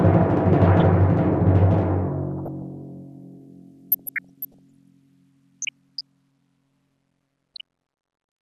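DAB burbling at 0.68–0.81, 2.35–2.62, 3.92–4.83, 5.62–6.01 and 7.54–7.61 s. Bit errors slip past correction, so single sub-bands jump in level. The music gets short blips of noise that show on a spectrogram as flickering rectangular blocks.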